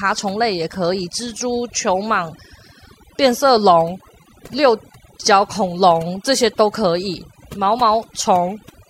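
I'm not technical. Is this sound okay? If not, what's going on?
No, not quite. This speech clip has overdone noise removal running through the whole thing, start to finish. Someone cleaned up a noisy recording with a noise reduction tool turned up too far. It knocks out any slice of the sound it mistakes for background hiss, and the softer bits of the voice get caught too. So the pauses go almost dead quiet with little sparkly specks.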